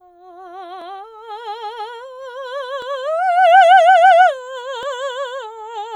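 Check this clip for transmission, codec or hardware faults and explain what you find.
The music has one fault, overlapping chunks, at 0.82, 2.82 and 4.83 s. Each 2.0 s chunk starts 7 ms early, replaying that sliver and producing a brief regular click.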